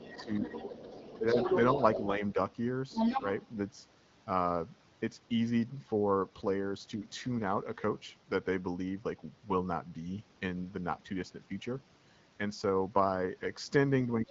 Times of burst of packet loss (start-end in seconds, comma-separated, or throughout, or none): none